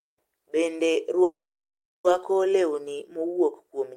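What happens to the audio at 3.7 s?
At 3.7 s the speech carries on intact, with no dropout, click, distortion or other fault.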